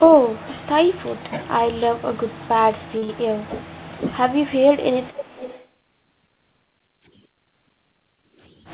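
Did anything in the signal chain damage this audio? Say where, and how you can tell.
Yes. At 1.30–1.34 s the speech dips by roughly 5 dB. At 3.43–3.56 s it drops harder, by roughly 10 dB. This is likely speech suppressed in double talk. The call processing's echo canceller mistook the talker for loudspeaker echo while both sides spoke, and turned the talker down.

At 2.98–3.04 s there is a brief smear where 40 ms of audio never arrived. This is short concealed packet loss on the network. The decoder filled the gap by extending the last sound, then blended back into the real signal.

Straight after, at 3.04–3.11 s, a sound is held about 46 ms too long. This is a short stall from a late packet. The jitter buffer ran dry, so the receiver stretched the last sound. Playback then resumed where it left off, with nothing lost.

From 5.03 to 5.68 s a faint delayed copy of the speech appears. It trails by about 0.44 s and sits roughly 15 dB below the direct sound. 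This echo leak likely comes from a loudspeaker at the far end. Its echo canceller let residual pickup through, and that residue was sent back. All of this sits inside the G.711 call band, which stops at 4 kHz.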